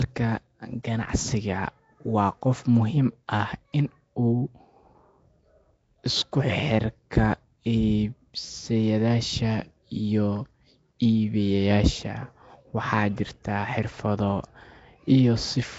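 Throughout, the speech carries a rough, hissy halo and smeared, underwater texture with nothing above 7.7 kHz, likely Nellymoser compression, consistent with Nellymoser Asao around 32 kbps.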